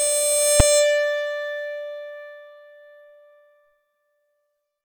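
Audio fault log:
0.60 s, invalid numbers at full scale: a short block of music went to infinite or invalid values and was pinned at one extreme value, far beyond the music's peaks, so it's one hard bang.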